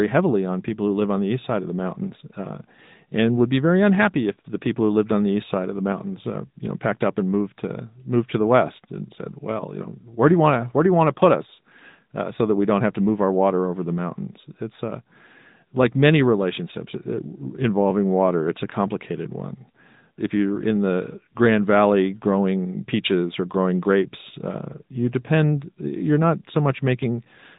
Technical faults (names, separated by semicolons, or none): AMR narrowband mobile codec